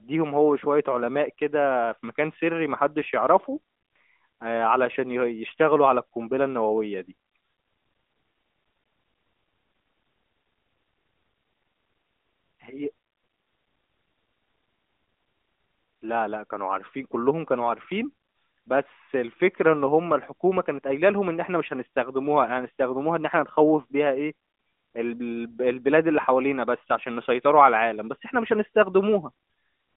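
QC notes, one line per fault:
No faults found; the speech carries the band-limited character of an AMR narrowband mobile codec path at 12.2 kbps, with the line band running from about 250 Hz to 3.6 kHz.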